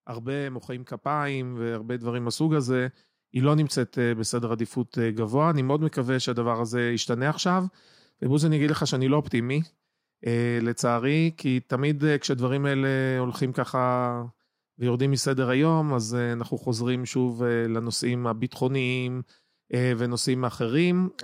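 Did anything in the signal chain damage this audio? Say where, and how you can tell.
Yes: microphone volume stepped up at call processing. Speech and background jump together by about 4 dB at 1.02 s and again at 2.04 s, as automatic gain raises input volume.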